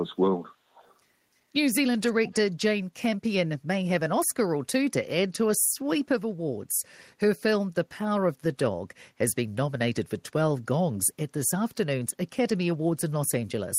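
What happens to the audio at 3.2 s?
Nothing goes wrong at 3.2 s; the speech carries on intact through that moment with no dropout, click, distortion or other audible fault.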